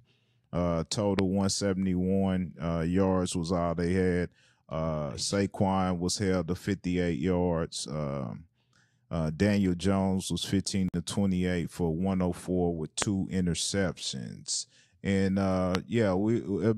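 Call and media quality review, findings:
Loud pop, 1.19–1.21 s, 13.02–13.04 s, 15.75–15.77 s: likely a voltage step from a plug, switch, static discharge or driver glitch entering the capture path. Each is one sharp pop, roughly 20 dB above the speech, which continues underneath.

Gap at a join of encoded pieces, 10.89–10.94 s: separately encoded segments spliced untrimmed, leaving encoder start delay and final-frame padding in place. A 54 ms gap cuts into continuous speech with smeared edges, then the speech resumes where it stopped.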